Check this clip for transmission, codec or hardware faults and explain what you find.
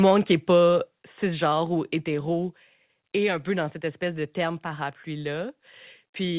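Two hardware-side faults stand out in this speech clip, heard through a call path whose band stops at 4 kHz, as a G.711 mu-law link would give.

Microphone overload, 0.06 to 0.12 s, just before "qui n'est pas cisgenre": peaks likely drove the converter about 2 dB past full scale, flattening a small share of samples into a harsh, crackly edge.

Microphone volume stepped down at 1.02 s, between "qui n'est pas" and "cisgenre ou": software likely cut the input gain in one step, so speech and background both drop abruptly by about 5 dB.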